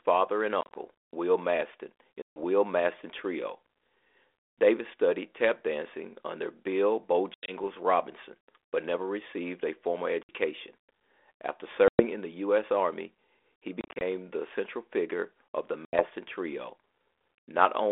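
Packet loss on an ADPCM call cuts hard-edged silent holes at 0.61, 2.22, 7.34, 10.23 (after "never received a formal"), 11.88 (before "in the"), 13.81 (before "the central figure of") and 15.85 s. Each removes about 60 to 140 ms of sound. At 0.61 and 13.81 s the loss is broken into short dropouts of up to 30 ms. After each hole, the decoder's adaptive predictor and step size no longer match the sender's. Speech therefore resumes with brief, slight distortion, settling within some tens of milliseconds. The link is 32 kbit/s G.726 with a 300 Hz to 3.5 kHz telephone band.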